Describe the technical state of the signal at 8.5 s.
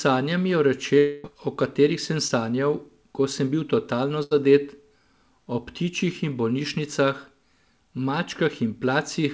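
At 8.5 s the signal is intact, with no fault present, only the band limit of the call path, with nothing above 8 kHz, which fits a G.722 wideband codec.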